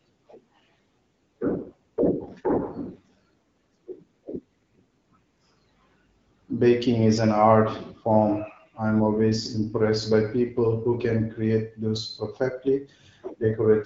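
From 1.49 s to 4.40 s the speech turns rougher and more synthetic, with a buzzy, raspy edge, then clears again. This is an AMR rate drop: the link switched the AMR-WB coder to a lower mode, which fits a step from 12.65 down to 8.85 kbit/s, leaving fewer bits for the excitation pulses. Bandwidth holds and there is no gap, and the lightly coded 12.65 kbit/s quality returns at 4.40 s.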